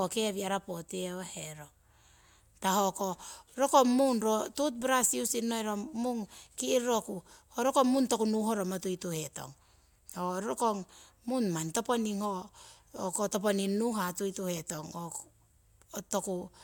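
No technical faults are audible.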